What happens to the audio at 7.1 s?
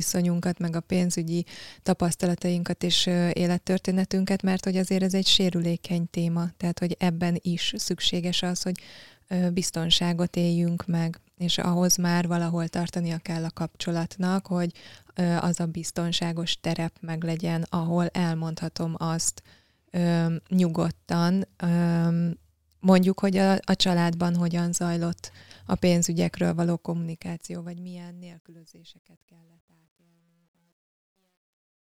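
Nothing goes wrong at 7.1 s; the speech there plays through cleanly, with no dropout, click or level change.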